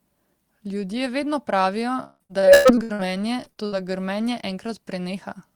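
Just after "vedno pravijo", from 2.03 to 3.01 s, repeated packet loss (robotic sound) sets in. Lost packets are patched by stretching the last sound, so more than half of the stretch turns choppy with pieces missing, with gaps up to 163 ms. A lighter burst follows at 3.37 to 3.74 s. Unlike a single dropout, the holes recur closely and are filled rather than left silent.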